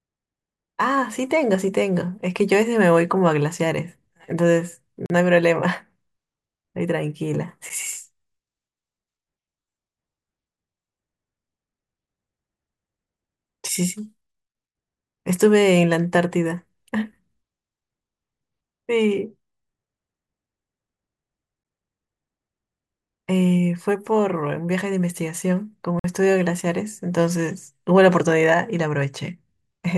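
Blocks of digital silence occur as the output briefly drops to zeros and returns with no fade: 5.06–5.10 s (40 ms), 7.69 s, 21.63 s and 25.99–26.04 s (48 ms). The short ones tick, and the longer two leave audible holes.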